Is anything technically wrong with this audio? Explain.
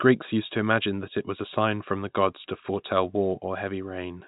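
No, nothing is technically wrong with this audio.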